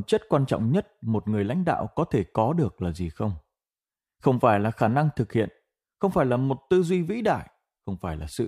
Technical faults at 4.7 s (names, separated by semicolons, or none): none